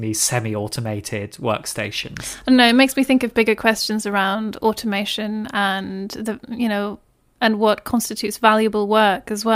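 Nothing stood out on listening to this speech recording.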